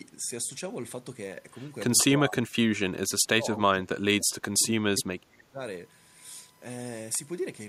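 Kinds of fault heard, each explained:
USB whine: A steady tone fixed at 1 kHz enters at 1.21 s and runs to the end, sitting about 30 dB below the speech. The pitch never moves with the talker, which suggests interference from the 1 ms frame rhythm of a USB bus leaking through power or ground. That fixed, exact frequency separates it from mains hum, which sits at 50 or 60 Hz and its harmonics, and from acoustic feedback, whose pitch swells and shifts.
Speech suppressed in double talk: The speech drops by around 25 dB from 2.15 to 2.62 s and again across a longer stretch from 2.8 to 5.6 s. The likely cause is an echo canceller that heard both ends talking at once, could not tell the local talker from loudspeaker echo, and turned everything down. Unlike a network dropout, the audio is ducked rather than replaced by silence or glitches.
Echo leak: At 4.59 to 4.63 s a brief, faint copy of earlier speech returns about 0.31 s late and roughly 25 dB below the direct sound. 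It is most likely loudspeaker sound from the far end that its echo canceller failed to fully remove and then sent back. The clear fixed delay and the brevity of the scrap distinguish it from room reverberation, which trails smoothly off the original instead of reappearing as a separate late fragment.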